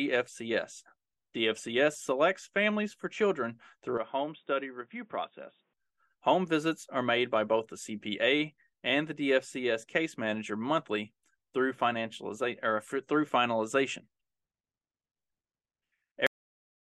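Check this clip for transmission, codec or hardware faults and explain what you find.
Two faults are present. From 3.98 to 5.73 s, right after "families for children through", the speech turns dull and boxy with nothing above 3.8 kHz, drops about 5 dB, and gains a faint noise floor, with no gap at the change. This is likely an input switched to a poorer device. At 16.27 s there is a cut-off end: the final buffers were lost, so the speech stops mid-sound into abrupt digital silence.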